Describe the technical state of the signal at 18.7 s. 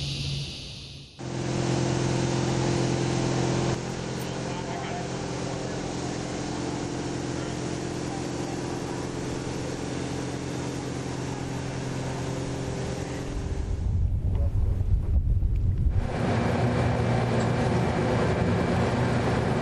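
At 18.7 s you're hearing the same damage that runs through the whole clip: MP3 compression, and plainly audible. The quieter detail flickers in and out from frame to frame, giving that watery, swirly texture with metallic chirps on hissy sounds and softened attacks. That's likely an encoder starved of bits, dropping weak frequency lines, which fits a low bitrate of around 64 kbps.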